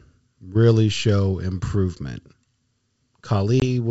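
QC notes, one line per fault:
3.60–3.63 s, packet loss on an ADPCM call: about one packet, 20 ms, becomes a hard-edged silent gap, flat in the waveform and a blank vertical strip on the spectrogram. The decoder's predictor and step size lose sync, so speech resumes slightly distorted before settling.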